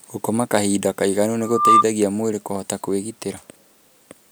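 From 1.41 to 1.85 s, just after "kahinda kaĩganu" and before "mwĩrĩ kũhota", a single pure tone near 1.2 kHz swells out of the speech over roughly a third of a second and peaks around ten decibels louder than the voice. This is loudspeaker feedback squeal. The microphone was picking up the loudspeaker it was driving, and at that one frequency the loop gain went above unity, so the tone kept feeding itself.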